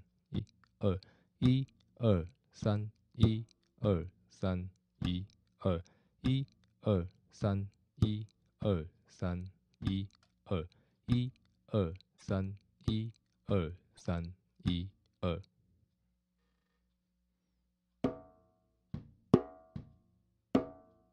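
The audio jumps forward with brief chirps, noise bursts or dropouts at 0.38–0.40 s, 12.16–12.23 s and 13.96–14.02 s. The likely cause is a broken MP3 bit reservoir: frames were lost, so the following frames decoded with the wrong borrowed data, in spans that fit 26.1 ms frames.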